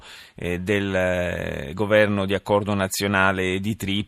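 Speech recording with no audible technical faults: nothing to flag on this pass.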